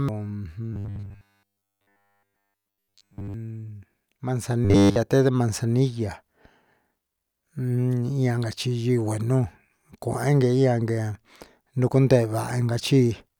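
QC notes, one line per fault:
0.73–3.34 s and 4.65–4.97 s: robotic sound from repeated short buffers. Speech collapses into a rigid metallic 100 Hz buzz, likely from the last 10 ms chunk repeating in place of all fresh audio. This shows as identical 10 ms waveform cycles and flat, evenly spaced 100 Hz harmonic lines on a spectrogram.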